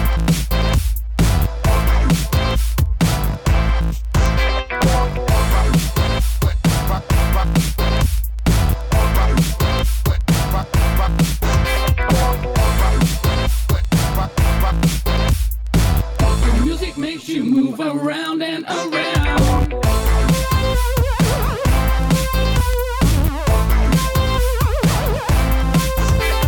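Word clock ticks run from 0.13 s to 26.44 s, a steady series of short clicks roughly every 70 ms, several hundred in all. The receiving device is free-running against the sender's clock, about 300 ppm apart, so each slip drops or repeats a single sample.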